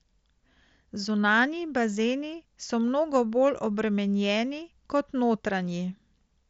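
No technical faults occur anywhere in the recording, so there is nothing to describe in time order.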